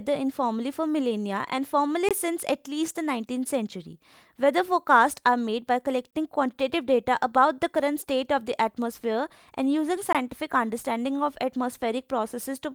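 Across the whole speech clip there is clock drift between sender and receiver: the sender's clock runs slow, roughly 2 percent behind the receiver's. The receiver therefore keeps running short of samples and has to stretch the stream to stay in step. On a waveform the drift itself leaves no single mark. It shows up only as a gradual misalignment that accumulates across the clip and drives the corrections described next.

From 0.46 s to 12.71 s there are repeated timing corrections. The receiver keeps repeating short pieces, always lengthening, so playback runs at about 98 percent speed and gains roughly 0.3 s overall. It is heard as a faint dragging, unsteady tempo with occasional tiny stutters at uneven spacing. On a spectrogram, harmonic tracks and syllable onsets show small duplicated slivers where segments were doubled.

A gap between chunks occurs at 2.09–2.11 s, 6.11–6.13 s and 10.13–10.15 s. 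Each is a 20 ms hole recurring every 4 s, which points to audio delivered in 4-second chunks with a player or padding leaving silence at each join. No sound is lost, but the speech is clipped into brief, hard-edged dropouts. The waveform drops abruptly to near silence, and the spectrogram shows a thin, clean vertical blank band spanning all frequencies.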